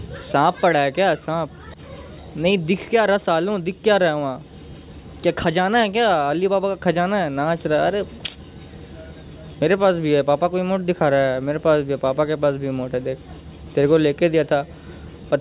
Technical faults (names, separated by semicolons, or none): none